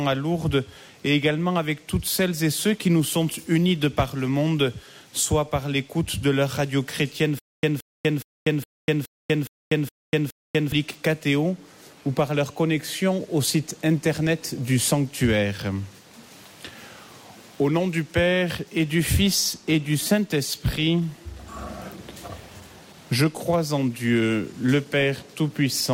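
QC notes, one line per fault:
7.39–10.72 s, stutter with silent gaps: a 174 ms burst of sound repeats 8 times at a steady 416 ms period, each copy followed by 243 ms of digital silence, and the audio that belonged in that span never plays. The likely cause is a stalled player or stream replaying its last fragment at each retry and then running dry. On a waveform it shows as identical blocks separated by flat silent lines; on a spectrogram it shows as repeated vertical slabs between fully black gaps.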